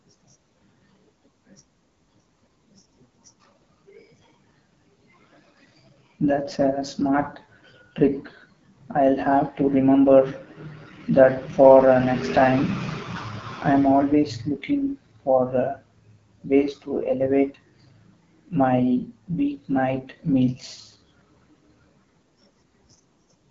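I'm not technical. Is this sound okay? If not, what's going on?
No. From start to finish the speech sounds rough and raspy, a bit muffled, with nothing above about 7.6 kHz. That's the AMR wideband (HD Voice) codec at one of its lowest settings, squeezing the voice so hard that clear detail gets replaced by coarse approximations.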